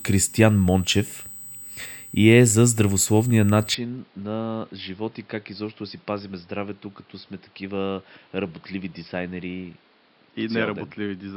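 A speech recording with two faults. A steady, fixed-pitch USB whine sits under the whole clip. Its fundamental is at 8 kHz, and it is strongest at the 16 kHz harmonic, roughly 20 dB below the speech. It comes from the USB bus drawing current in 125-microsecond microframes, leaking in through power or ground. At 3.75 s, just after "и е за здравословния", the sound turns dull and quieter with no gap. The input was likely switched to a poorer device. From there to the end nothing passes above 5.4 kHz. The level drops by around 10 dB, and a new noise floor sits roughly 30 dB below the speech.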